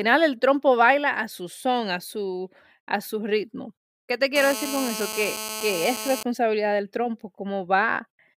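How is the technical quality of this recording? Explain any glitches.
The recording has one clear fault: GSM phone buzz from 4.36 to 6.23 s. A 2G phone on a call sat near the recording chain. It transmitted in pulses about 217 times a second. The audio circuit rectified those radio bursts into the signal. The result is a hard, raspy buzz at 217 Hz, rich in harmonics. It stays steady throughout and sits about 8 dB below the speech. It has no relation to what is being said.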